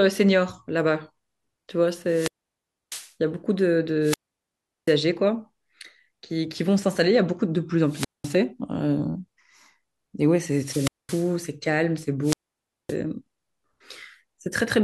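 Speech with repeated wireless microphone squelch dropouts at 2.06–3.13 s, 4.01–4.96 s, 7.85–8.38 s, 10.48–11.40 s and 12.22–12.96 s. Each brings rising hiss, then near silence for 0.64, 0.74, 0.20, 0.22 and 0.56 s. The radio link fades and the receiver's squelch mutes it.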